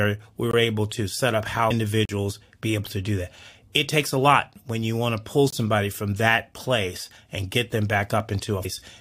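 At 0.51 to 0.53 s the speech drops into a block of digital silence lasting about 21 ms, cut in and out with no fade, so the whole event reads as a short hole. The output buffer was likely not filled in time, and the gap length fits a 1024-sample buffer. At 1.70 s damaged data in a compressed stream: corrupted bytes made the decoder misread a frame, lose sync and resume at the next header. At 2.05 to 2.09 s a second block of digital silence, about 37 ms long, is long enough to hear as a short hole. At 5.50 to 5.53 s a third gap of about 21 ms again fits a 1024-sample buffer underrun and sounds like the first gap. At 8.64 s another blip of corrupted compressed data occurs, like the one at 1.70 s.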